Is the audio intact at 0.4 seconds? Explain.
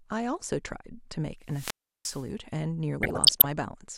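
Yes, the speech at 0.4 seconds is intact, with no dropout, click, distortion or other fault at that moment.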